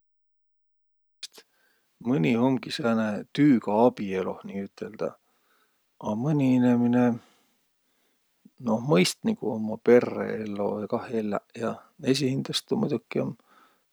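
A cut-off start occupies the opening of this speech clip: from 0.0 to 1.23 s there is only digital silence, and at 1.23 s the speech begins abruptly, already partway through a sound. Capture or streaming evidently started late, so the first part of the utterance was never recorded. Instead of a natural onset with its own attack, the audio jumps straight from dead silence into speech at full level, giving a clipped, truncated entry.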